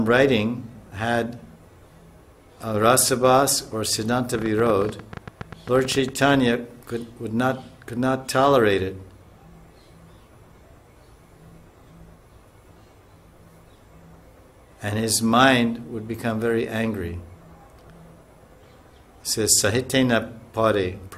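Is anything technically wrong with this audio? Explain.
Yes, there's a train of clicks from 4.35 to 6.35 s: around twenty same-shaped pops at an uneven pace, about 11.5 per second, peaking around 5 dB above the sound. Likely something injecting pulses, like nearby-equipment interference or a faulty connection or power supply.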